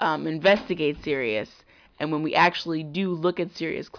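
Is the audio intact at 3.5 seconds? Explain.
Yes, at 3.5 seconds the speech plays through intact, with no dropout, click, distortion or other fault audible at that moment.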